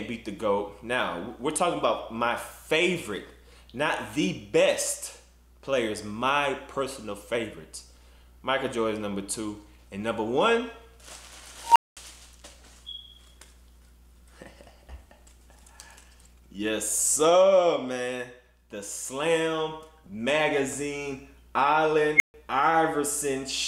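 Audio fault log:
11.65–11.97 s and 22.16–22.34 s, unstable filter: a recursive filter runs away, so a tone near 1 kHz, then near 2 kHz, swells to clipping within 110 ms and then 43 ms, and collapses into silence of 210 ms and 140 ms as it overflows and resets. Unlike acoustic feedback, it builds far faster and ends abruptly in a silent gap.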